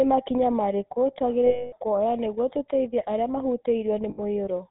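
The whole clip runs through the GSM full-rate codec, which sounds like the 13 kbps standard. Nothing gets through above 4 kHz, and the pulse-driven excitation gives the speech that buzzy, gravelly roughness.

From 1.46 to 1.74 s, between "makinya marĩkũ" and "kuoya nĩguo tũteithie arĩa", you can hear lost GSM frames. The last good frame gets repeated, so it hangs as a metallic ring. A shorter dropout does the same from 4.1 to 4.2 s.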